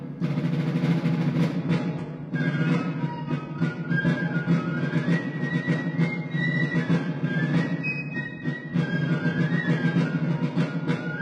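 At 1.62 s the audio switches abruptly to an adaptive stream at a lower bitrate and stays there to the end. Content above about 11 kHz vanishes, and the remaining treble takes on the synthetic, swirly texture of spectral band replication, which points to a drop from a full-rate AAC stream to a very low-rate HE-AAC version. Unlike a dropout or buffering stall, there is no gap; unlike a plain low-pass filter, compression artefacts rise at the same moment.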